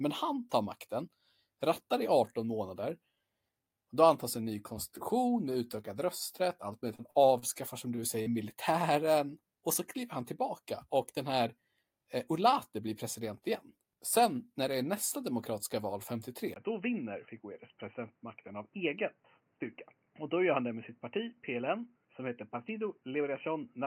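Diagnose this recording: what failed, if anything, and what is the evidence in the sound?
Network stage, repeated packet loss (robotic sound): from 6.95 to 7.59 s, right after "utökad rösträtt allt möjligt", the speech turns choppy and mechanical. Four gaps, the longest about 41 ms, are each patched by extending the preceding sound, so roughly a fifth of that stretch is synthetic fill.

Network stage again, short concealed packet loss: at 8.22 to 8.29 s a single dropout of about 40 ms is bridged by the decoder's concealment. It continues the last sound through the hole and blends back, leaving a brief smear.

Capture stage, input switched to a poorer device: at 16.54 s, after "är nästa demokratiska val", a 20 ms silence precedes a duller, boxier sound with nothing above 3 kHz. The level drops about 5 dB and a new noise floor appears roughly 40 dB down. This is likely a change to a narrowband microphone or headset call profile.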